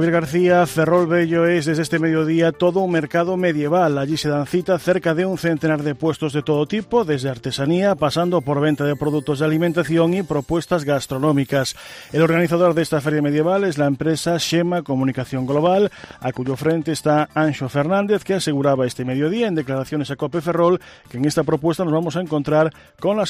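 From 15.20 to 16.67 s, a train of clicks ticks over the sound. About ten similar pops arrive unevenly, near 6.9 per second, as loud as the sound itself. Likely interference or a faulty connection.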